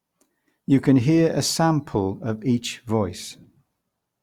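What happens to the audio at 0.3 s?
At 0.3 s the speech runs on intact, with nothing interrupting or altering the sound at that point.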